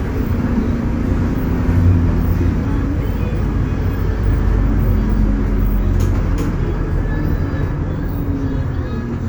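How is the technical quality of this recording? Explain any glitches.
Two glitches, both compressed frames skipped. At 2.60 s and again at 4.18 s, roughly seven 46.4 ms frames never get decoded, so the audio leaps ahead by about 0.4 s and then about 0.3 s.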